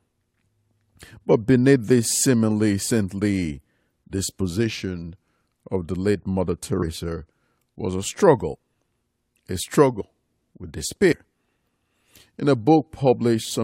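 The audio jumps forward twice where compressed frames were skipped: at 10.00 s and again at 11.11 to 11.13 s, losing roughly 200 ms and then about 150 ms of material. Each join is a jump ahead, not a stretch of silence. That separates it from a buffer dropout. The jump spans whole frames of about 23 ms each, which fits 1024-sample frames at 44.1 kHz.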